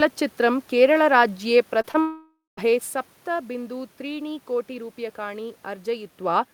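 Around 1.81 to 1.85 s and again at 1.91 to 1.96 s there's short concealed packet loss: about 20 ms of speech each time didn't arrive, so the decoder stretched the previous sound to cover it. You hear a quick smear or wobble.

Right after, from 2.0 to 2.59 s, the audio drops out for roughly 0.6 s, likely a long network dropout. The last sound carries on as a fading buzz or hiss, then goes quiet for about 0.17 s before speech comes back with that stretch missing.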